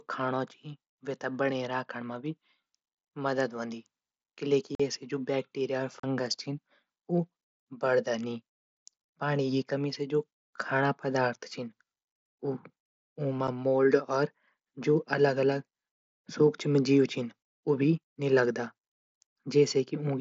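At 4.75 s, just before "ऐसे भी जू वैक्टीरिया", the speech drops out for 45 ms. It drops out again at 6.00 s, right after that phrase, for 37.5 ms, and briefly at 13.47 s. This is unconcealed Bluetooth headset packet loss: voice packets between headset and phone never arrived, and silence took their place. The holes have hard edges, and the timings fit runs of 7.5 ms frames. Concealed loss would sound different, smeared or repeated rather than empty. Around the gaps, the wideband mSBC sound carries only light graininess.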